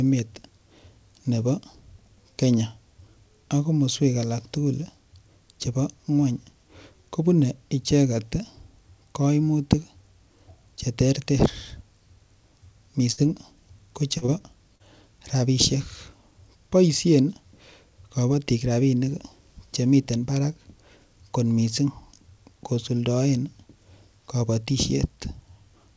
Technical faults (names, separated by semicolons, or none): burst of packet loss; repeated packet loss (robotic sound)